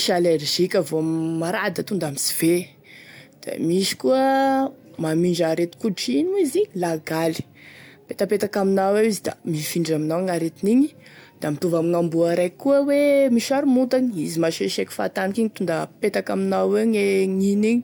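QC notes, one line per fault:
No faults detected in this speech recording.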